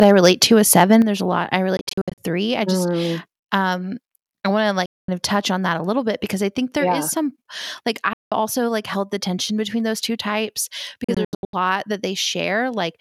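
From 0.01 to 0.3 s and 0.75 to 0.95 s the speech peaks crack harshly. This is likely microphone overload, with tops flattened about 5 dB and 2 dB over full scale.

At 0.03 s and 1.02 s the level drops abruptly by about 3 dB, then about 7 dB. The cause is likely the microphone volume being stepped down by the call software.

Bluetooth dropout is the likely cause of the holes that follow. From 1.77 to 2.18 s, between "there's a lot I" and "I just mm um", short gaps are scattered and the longest lasts 61 ms. Solid gaps follow at 4.86 to 5.09 s, after "um I want to", and at 8.13 to 8.32 s, after "yeah is some like". From 11.04 to 11.53 s there are scattered gaps again, the longest 81 ms. After each hole the speech resumes further on, as if it had kept playing.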